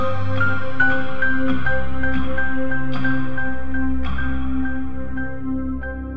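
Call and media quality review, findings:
Music clip reviewed; no faults found. No action required.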